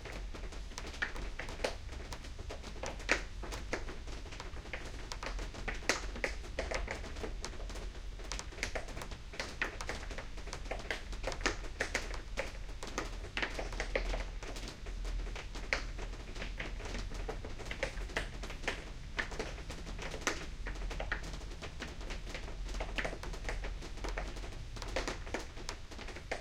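At 21.81 s and again at 23.70 s a single sharp click cuts through the audio, each likely from dropped samples: a fraction of a millisecond skipped, so the waveform jumps abruptly. Unlike a dropout, no audible gap or silence follows, only the instantaneous tick.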